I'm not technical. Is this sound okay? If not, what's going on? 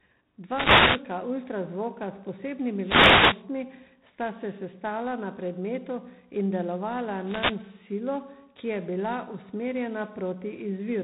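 No. All the way through, the speech has a rough, rasping hiss that gets louder and softer along with the voice, and it sounds dull and boxed-in, like an old phone line, with nothing above about 3.8 kHz. This is G.726 ADPCM, a telephone-style coding that stores each moment of sound as a rough record of how it differs from a running prediction of it. Here it uses fewer bits than the standard cordless-phone setting, so those records are coarse, and the errors come out as that gritty hiss.

On top of that, there are three short bursts of static, like a swish or crackle washing over the voice. They come at 0.45 to 1.08 seconds, 2.78 to 3.46 seconds, and 7.19 to 7.63 seconds. These are wireless microphone noise hits. A radio microphone's signal can briefly cancel itself out when reflections bounce around the room. When that happens, the receiver's own background noise surges up and partly drowns out the voice until the signal recovers.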